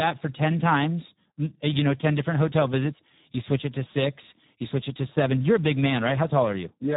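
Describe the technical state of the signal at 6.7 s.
At 6.7 s the speech sounds hoarse and noisy, with a dull, boxed-in top end: nothing is present above about 3.8 kHz. This is heavy Speex codec damage, and it runs through the whole clip. At a setting that fits roughly 8 kbps, Speex's CELP model has too few bits for the excitation signal, so the voice loses its natural texture and takes on a noisy, hoarse quality.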